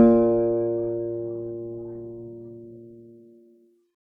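Nothing in the music stood out as a problem on listening.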